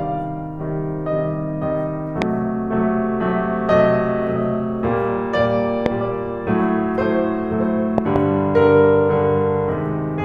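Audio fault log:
2.22–2.24 s, 5.86–5.88 s and 7.98–8.18 s: loud pop. Sharp pops (two at 7.98–8.18 s), about 15 dB over the music, which continues underneath. Likely a voltage spike from a switch, plug or static.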